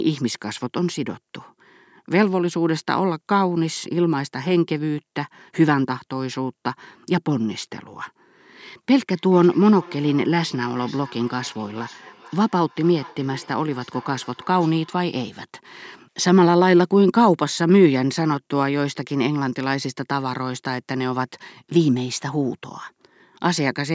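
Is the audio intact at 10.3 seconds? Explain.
No. From 9.15 to 15.1 s there is feedback echo between two devices: one device replays the other's microphone feed, which that microphone picks up again. Each sound returns roughly every 0.4 s, thinner and ringing, peaking about 24 dB below the speech.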